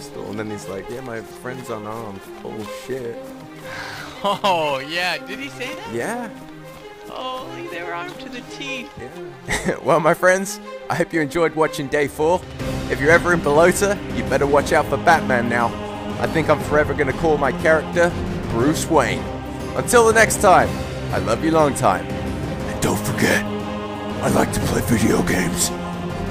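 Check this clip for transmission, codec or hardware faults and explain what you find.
One fault stands out, from 1.95 to 6.63 s: crude rate conversion. Samples were repeated or dropped rather than filtered, in a way that fits a 44.1 kHz to 48 kHz conversion, leaving an error roughly 25 dB below the signal. It sounds like a gritty, inharmonic fizz riding on loud and high content. Unlike steady hiss or quantisation noise, it comes and goes with the signal and adds tones unrelated to the material.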